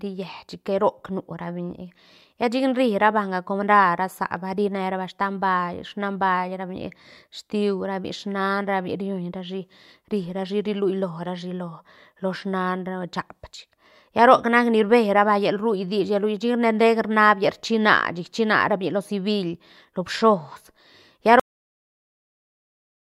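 The final buffers of the recording were never written out, so the speech has a cut-off end at 21.40 s. It stops mid-sound and drops straight into digital silence with no natural decay, and that dead silence runs for about 1.7 s.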